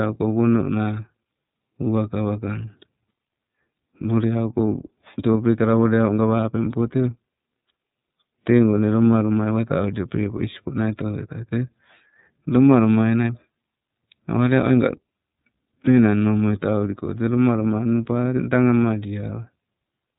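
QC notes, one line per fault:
throughout: iLBC codec; speech is plainly rough and synthetic, nothing above 3.8 kHz, from coding each frame independently, fitting 30 ms frames at 13.33 kbps.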